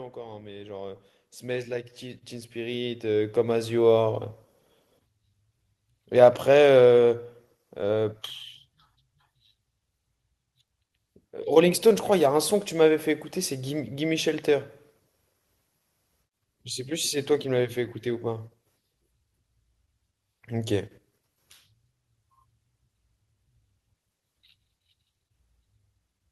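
Automatic gain rising from 0.13 to 4.11 s: the gain control judged the input too quiet and raised it by about 16 dB, lifting the voice and background together.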